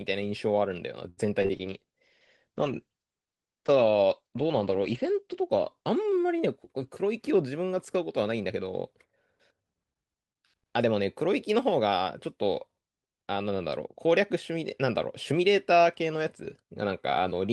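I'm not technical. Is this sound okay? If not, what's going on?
No, there are several problems, all bunched into the early part of this speech clip, plus one later hiccup.

From 1.09 to 1.27 s a sound is held a little too long, as if the speech briefly catches and drags, with a faint buzz or dip. This is a short stall from a late packet. On a call, audio arrives in small pieces, and one piece showed up late. Rather than go silent, the receiving end stretched the last sound for about 80 ms until the piece arrived, then carried on without losing anything.

Just after, from 1.42 to 1.51 s, there is a quick smear or wobble, where a small bit of sound can seem to blur or drop out. This is short concealed packet loss, happening twice in a row. Two tiny pieces of audio, about 20 ms each, never arrived in time. The receiver covered each gap by continuing the sound that came before and then blending back into the real audio.

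From 1.54 to 6.43 s the voice turns rougher and more muffled, as if heard through a cheaper line. It is at its worst for roughly three and a half seconds of that stretch. This is a call bitrate drop. The connection judged it had less room, so the audio was squeezed into far less data. The top end was trimmed from about 12 kHz to 8 kHz, which takes away crispness.

From 6.42 to 7.33 s, and again from 11.27 to 11.88 s, the speech sounds slightly rushed, about 5 to 6 percent faster, while the pitch stays the same. This is a jitter buffer speed-up. Audio had piled up waiting to be played, so the receiver trimmed out many tiny slivers to catch up, a few hundredths of a second in total each time.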